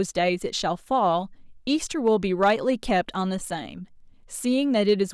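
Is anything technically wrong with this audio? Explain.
Yes, the speech hits hard clipping twice: from 2.07 to 2.69 s, overdriven by about 3 dB, and briefly from 4.89 to 5.02 s, by about 1 dB. The level exceeds what a stage can pass, so peaks are sliced flat, adding high harmonics. The first stretch sounds like crackle on peaks, and the second like a crackle. The waveform shows squared-off tops, and the spectrogram shows vertical smears of broadband energy.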